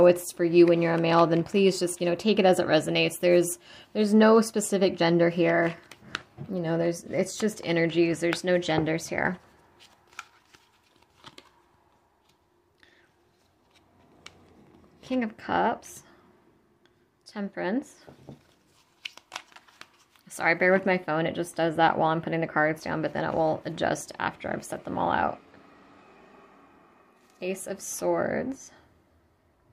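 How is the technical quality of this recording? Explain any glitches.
No technical faults are audible.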